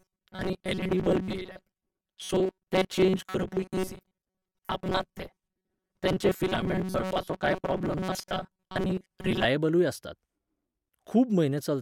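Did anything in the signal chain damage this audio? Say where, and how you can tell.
Yes. The driver or buffer stage likely ran short of incoming audio and kept replaying its last short buffer to cover the gaps, so most of the real signal between 0.01 and 9.46 s was skipped. That produces robotic sound from repeated short buffers: the speech becomes a rigid, metallic buzz locked at 188 Hz, a repeat period of about 5.3 ms, which fits a buffer of roughly that length, and it follows the original only roughly.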